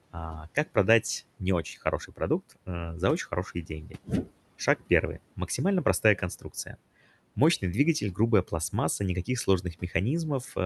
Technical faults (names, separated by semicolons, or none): speech cut by the noise suppressor